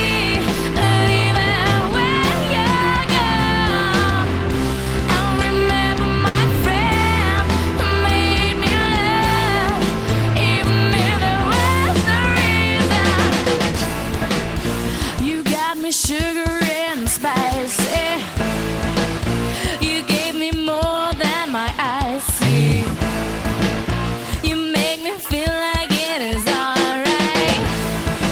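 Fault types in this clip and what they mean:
Short stall from a late packet: from about 6.28 to 6.38 s one packet arrived after its playout moment, the jitter buffer ran dry, and the receiver held the last sound for 65 ms, a brief frozen hang with a slight buzz or dip. Playback then picks up exactly where it paused, so nothing is skipped and everything after runs 65 ms later. A lost packet differs: concealment covers a gap where audio is actually missing.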